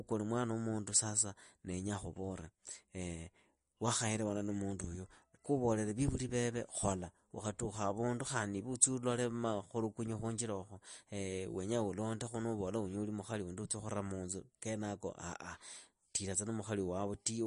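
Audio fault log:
Throughout, MP3 compression: speech stops dead above 10.6 kHz and sounds plainly watery and swirly, likely from a bit-starved MP3 encoder, consistent with about 40 kbps.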